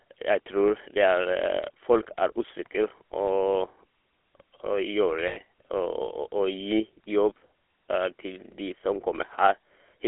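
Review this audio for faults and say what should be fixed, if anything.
The speech carries GSM full-rate codec damage throughout. Its buzzy, gravelly roughness fits a 13 kbps GSM full-rate path. The codec reduces the voice to a vocal-tract filter driven by a sparse, regularly spaced pulse excitation, and the band stops near 300 Hz and 3.4 kHz. To prevent it, capture or route the call over a wideband codec such as AMR-WB or Opus instead of GSM full rate.

Lost GSM frames occur from 5.28 to 5.37 s, a gap of 80 ms, which fits four consecutive 20 ms frames. The decoder fills the gap by repeating the last good frame's settings, so the sound hangs as a brief rough, metallic ring. To prevent it, improve radio or transport reliability, or add redundancy or interleaving so that consecutive frames are not lost together.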